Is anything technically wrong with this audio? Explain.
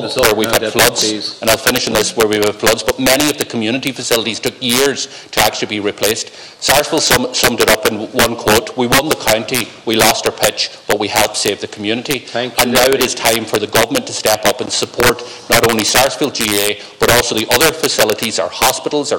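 Yes, there's integer overflow throughout: gain pushed about 10 dB too hot wraps a small fraction of peaks to the opposite sign, giving harsh cracks on loud moments.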